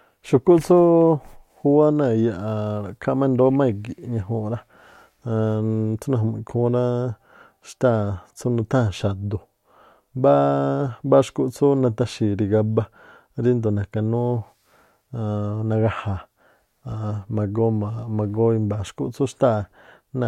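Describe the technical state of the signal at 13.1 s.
At 13.1 s the speech signal is intact, with no audible fault at that point.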